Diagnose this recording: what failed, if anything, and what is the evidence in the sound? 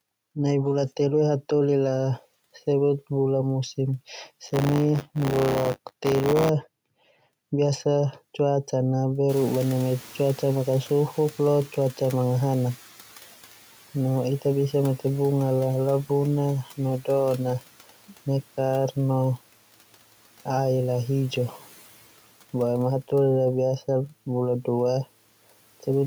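A robotic 100 Hz buzz rides on the speech from 4.45 to 6.49 s. This is buffer tearing at the driver or buffer stage: writer and reader pointers cross each period, so roughly a tenth of every buffer replays audio about 20 ms old, with hard joins.

Around 9.5 s the room noise jumps by about 23 dB and comes through with less reduction at first, then sinks by about 8 dB until 12.89 s. This is the call-processing noise suppressor catching up, its noise estimate taking 3.6 s to adapt after 9.29 s.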